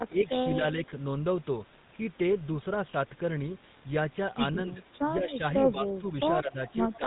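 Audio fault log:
Throughout: GSM full-rate codec. The speech has a buzzy, gravelly roughness that is plainly audible. Nothing comes through above about 3.8 kHz, so the sound is dull and boxy. The codec models the vocal tract and drives it with a sparse, regular pulse train, keeping only a fraction of the excitation. Fine detail between those pulses is lost. The grit and band limit fit the 13 kbps full-rate coder.
4.65–4.86 s, 5.18–5.42 s, 6.42–6.59 s and 6.98–7.06 s: speech suppressed in double talk. The level dips in short pieces. The deepest drop is about 15 dB in the first, about 5 dB in the second, about 10 dB in the third and about 5 dB at the very end. The likely cause is an echo canceller that heard both sides at once. It could not tell the talker from loudspeaker echo, so it turned everything down.
6.67–6.72 s and 6.94–6.98 s: echo leak. Two brief, faint scraps of a delayed copy of the speech appear, about 25 dB below the direct sound and trailing it by 151 ms. 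The likely cause is a far end on a loudspeaker whose echo canceller missed part of what its microphone picked up. That residue was sent back down the line.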